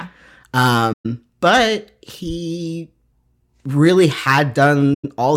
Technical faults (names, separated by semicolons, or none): AAC frame loss with muting